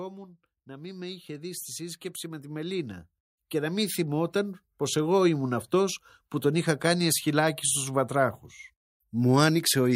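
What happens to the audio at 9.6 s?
At 9.6 s the speech carries on intact, with no dropout, click, distortion or other fault at that point.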